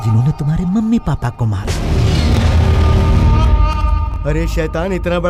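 Chunks out of order at 2.33 s and again at 4.12 s: in each case one block of about 21.33 ms arrives one chunk late and plays after its successor, leaving a brief jumbled blip with hard joins.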